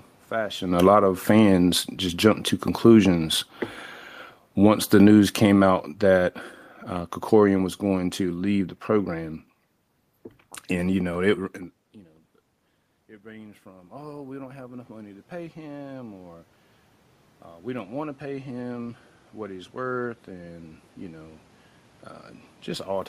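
From 0.62 to 3.39 s the automatic gain falls by about 6 dB, briefly interrupted by an automatic gain rise of about 4 dB between 0.96 and 1.53 s. The control is chasing a level change as the talker shifts position near 0.5 s, so speech and room noise sink and swell together. A second automatic gain fall of about 7 dB runs from 4.5 to 8.72 s, slowly pulling the whole sound down.

After "and you know it" the talker moves away, and the input drops by about 20 dB. The automatic gain rises by about 9 dB from 11.96 to 16.48 s, lifting speech and background together over several seconds. Another automatic gain rise of about 4 dB follows from 17.68 to 21.36 s, with the room noise swelling along with the speech.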